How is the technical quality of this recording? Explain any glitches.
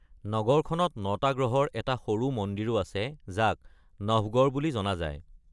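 The recording has no technical glitches. There is nothing to explain.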